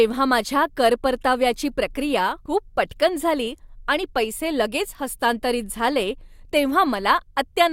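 At 2.45 to 2.52 s, just after "माझ्या कर परताव्याची प्रक्रिया" and before "पटकन झाली आणि पैसे", the speech jumps forward with compressed frames skipped. Roughly a tenth of a second of audio is missing, which fits a handful of lost 20 ms codec frames. Unlike a dropout, there is no silent gap.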